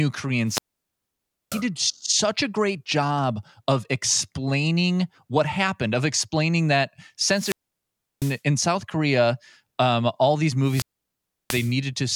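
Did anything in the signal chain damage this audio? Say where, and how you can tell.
Yes, a wireless microphone squelch dropout on the radio link: at 0.45–1.64, 7.31–8.41 and 10.62–11.76 s the RF signal fades, hiss rises, then the receiver mutes for 0.68–0.94 s.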